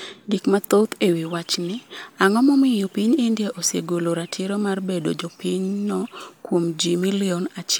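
Nothing in this speech recording stands out as a technical fault, so there's nothing to flag from one moment to the next.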